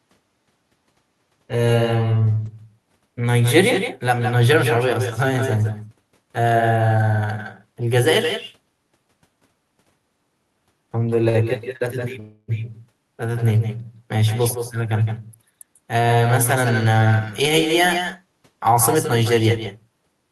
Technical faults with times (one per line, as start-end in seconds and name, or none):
0.00-20.32 echo with no canceller
11.09-11.36 short stall from a late packet
11.77-11.82 short stall from a late packet
12.20-12.50 call audio freeze
15.10-17.43 jitter buffer speed-up
17.85-18.33 jitter buffer speed-up